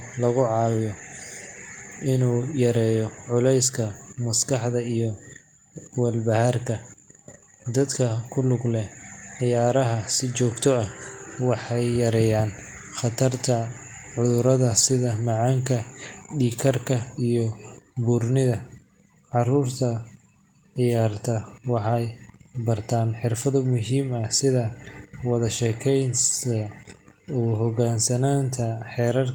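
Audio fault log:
No faults heard.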